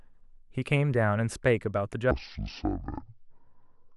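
From 2.11 s to the end, the speech drops into a section at the wrong speed. At 0.53x it is slowed and about ten semitones deeper, with harmonics compressed downward on a spectrogram, likely from a clock mismatch.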